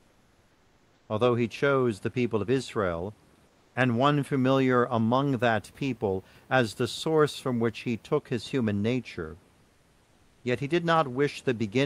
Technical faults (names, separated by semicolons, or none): comfort noise in place of the background